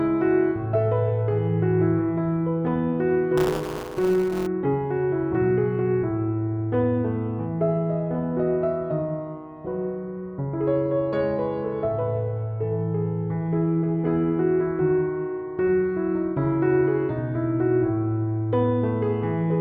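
Buffer tearing from 3.37 to 4.47 s: writer and hardware reader have slipped, splicing about a tenth of each period from roughly ten milliseconds earlier, giving a rattling 188 Hz buzz that fits a 256-sample buffer.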